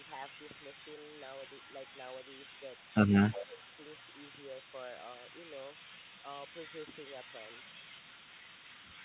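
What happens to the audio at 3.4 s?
Right around there two things overlap. From 3.30 to 3.62 s the speech gets pushed down by about 10 dB for roughly a third of a second. That's speech suppressed in double talk, most likely because both ends were talking at once and the echo canceller couldn't tell the near talker from the loudspeaker echo, so it ducked everything. You hear the level sag briefly.

Then from 3.41 s right through to the end there's an echo leak: a copy of the speech trailing about 208 ms behind, very faint, around 35 dB below the main signal. The likely cause is a far-end speakerphone whose canceller didn't fully remove what its mic picked up, so the residue came back. It shows up as a quiet ghost behind the voice, sharing the same narrowband sound as the rest of the call, where nothing reaches above 4 kHz.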